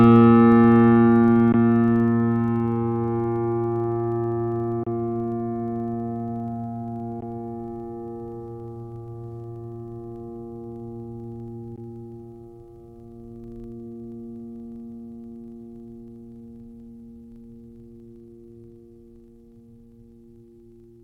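A steady 25 Hz buzz runs under this music from start to finish, a rapid ticking that grows and fades with the level of the playing. It is a filter restarted on every block: each block starts from zero state, adding a small transient 25 times a second. The sound also cuts to silence at 1.52 s, from 4.83 to 4.87 s, at 7.21 s and at 11.76 s, then resumes as if it had kept playing. The likely cause is Bluetooth dropout, with gaps of about 14.5 ms, or 29 ms at 4.83 s, which fits one or two lost packets.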